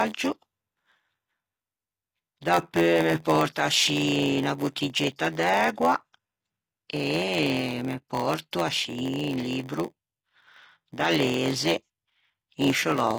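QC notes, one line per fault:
Throughout: HE-AAC compression. The codec likely sits at a low HE-AAC v2 rate, coding only the lower spectrum and rebuilding the treble by copying lower bands upward under a coarse envelope. The damage is plainly audible. The top end stays bright but is synthetic, so its harmonics fail to line up with those below the crossover, and sibilants come out gritty, metallic or lispy.
Throughout: block size mismatch (padded). One stage hands over blocks shorter than the 512-sample blocks the next stage reads, and the shortfall in each block is filled with silence. Those regular gaps produce a steady buzz at 86.1 Hz, which fits a 512-sample read at 44.1 kHz. Because the gaps add time without changing the waveform, the speech runs slow at 0.938 times normal speed with its timbre intact.
5.16 s to 5.19 s: pre-echo. A sharp attack lands late in a transform block, and the codec spreads the quantisation noise meant for the loud onset evenly across the whole block, including the quiet stretch before it. 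That leaks about 26 ms of hiss ahead of the attack, so the onset is announced by a brief rush of noise and loses its crispness, sounding softened and smeared.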